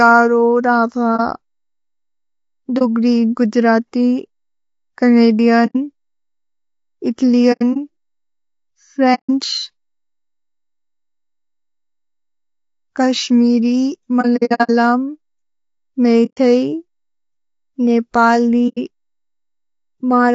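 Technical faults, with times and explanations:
Throughout: low-delay AAC compression. The speech sounds rough and grainy, with noise between harmonics and a thin top band. Likely AAC-ELD at around 32 kbps, whose short frames resolve pitch poorly.
1.16–1.21, 2.78–2.82, 5.66–5.76, 7.52–7.78 (broken holes), 9.14–9.31, 14.21–14.70 (scattered holes), 16.25–16.39, 18.68–18.79: AAC frame loss with muting. The sound dips or fades out and back over soft edges, which sets these apart from hard dropouts.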